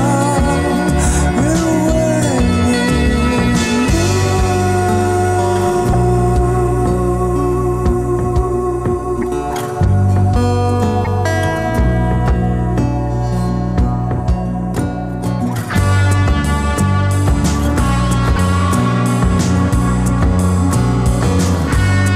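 Short glitches break the sound at 5.92–5.95, 9.21–9.24, 11.04–11.07 and 18.35–18.38 s. A broken MP3 bit reservoir is the likely cause: missing 26.1 ms frames make later frames decode wrongly.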